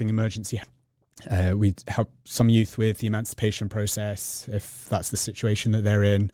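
A speech clip with two faults close together. At 0.63 to 0.65 s there is a skip ahead: roughly a second of speech is simply missing, and the audio on either side is butted together with no silence or concealment filling the join. That separates it from a dropout, where a gap or muffled fill would be heard; here the sound just lurches forward mid-flow because a stretch of audio was dropped while later audio was already waiting. Right after, from 0.81 to 3.19 s, a jitter buffer speed-up makes the talker sound rushed, running at about 109 percent speed while pitch stays put. The receiver was still holding more audio than its target and trimmed it away by cutting out short pitch-period-sized slices over and over, shedding something like a fifth of a second in total. The unchanged pitch is what tells this apart from a sample-rate mismatch or resampling error, where faster playback would also raise the voice's pitch.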